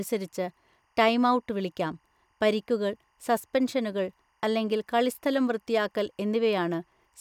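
Speech runs the whole way through with timecode bleed underneath it. A faint, steady chirping warble sits about 45 dB below the voice. Linear timecode from an adjacent track or cable has leaked into the audio. Its square wave flips between two pitches near 1 and 2 kHz, and the rhythm fits 24-frame code. On a spectrogram this appears as thin horizontal bands near 1 and 2 kHz spanning the entire clip. On the waveform it is a low, constant fuzz.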